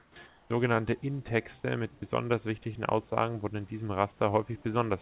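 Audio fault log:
0.00–0.16 s and 0.28–0.50 s, comfort noise in place of the background: in both gaps the room background, sitting roughly 30 and 33 dB below the loudest speech, turns into a smooth, featureless hiss lacking the texture of the real noise floor, about 7 dB quieter in the first gap and about 2 dB quieter in the second. This is likely discontinuous transmission: the sender pauses during silence and the receiver synthesises shaped noise until speech resumes.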